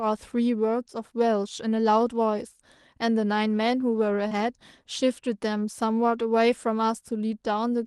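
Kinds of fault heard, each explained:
Short concealed packet loss: around 4.27 to 4.33 s, roughly 40 ms of the speech didn't reach the decoder in time, so the receiver papered over the gap by stretching out what it had just played, carrying on the pitch of voiced sound or shaping noise for unvoiced bits, then cross-fading back into the real audio. You hear it as a quick smear or wobble, and a short consonant in there can just go missing.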